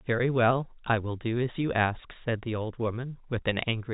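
Nothing goes wrong in this bit of speech; it's simply carried over ordinary G.711 telephone coding, so the sound tops out around 3.8 kHz as that format does.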